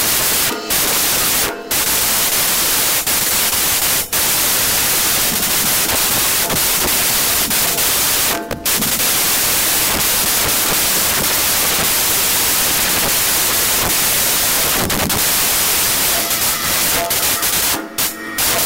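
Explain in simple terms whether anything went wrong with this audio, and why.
Wrong sample width: throughout, the audio was read back using a different sample size than it was recorded with, which fits 16-bit data being read as 24-bit. Bytes get mismatched, so you hear loud noise burying the real sound, which plays 1.5 times too fast and too high.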